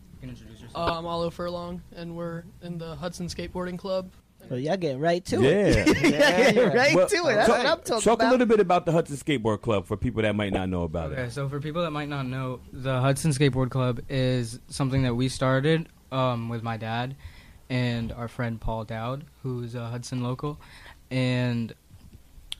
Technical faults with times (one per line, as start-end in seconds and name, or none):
0.87-1.06 DAB burbling
10.44-10.57 DAB burbling